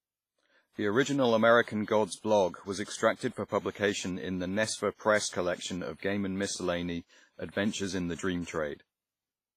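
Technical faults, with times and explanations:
Throughout, WMA compression: the speech sounds ringing and washy, with a hiss that swells and fades with the signal and smears around each syllable. This heavy damage fits a transform codec likely running at a low bitrate around 24 kbps, where coarse quantisation spreads noise across long blocks and drops weak components. A spectrogram shows nothing above 15.5 kHz, with blocky, patchy gaps where quieter detail has been zeroed.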